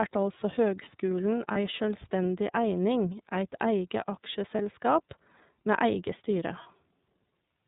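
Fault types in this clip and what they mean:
iLBC codec: The speech sounds plainly rough and slightly synthetic throughout, confined to a narrow telephone band with nothing above 4 kHz. A narrowband VoIP coder rebuilds each 30 ms frame's excitation on its own, which fits iLBC's 13.33 kbps mode.
lost iLBC frames: Three brief held, faintly buzzy vowel-like patches at 1.52, 4.55 and 6.63 s, the first just after "altså høgskulen". Each is one missing 30 ms frame that the decoder filled by repeating the last pitch cycle mixed with noise, and clear speech returns immediately.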